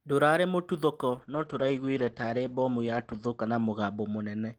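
From 1.13 s to the end, a call bitrate drop cuts the speech from 32 to 10 kbps for about 1.9 s. Bandwidth narrows from 20 kHz to 8 kHz, so the sound turns muffled and coarse.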